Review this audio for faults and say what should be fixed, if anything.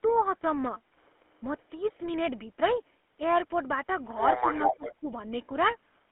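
GSM full-rate codec, throughout: the audio carries a buzzy, gravelly roughness and nothing outside roughly 200 Hz to 3.4 kHz, which fits a 13 kbps pulse-excited vocal-tract coder. Use a wideband codec such as AMR-WB or Opus on this path.

Speech suppressed in double talk, 4.59 to 5.12 s: the voice dips by about 20 dB in pieces, likely because the echo canceller turned everything down while both sides spoke. Tune the canceller's double-talk detector so it keeps near-end speech when both sides are active.

Echo leak, 4.62 to 4.94 s: a copy of the voice returns about 371 ms late at roughly equal level, likely loudspeaker pickup the far-end canceller failed to remove. Improve far-end echo cancellation or have that side use a headset instead of a loudspeaker.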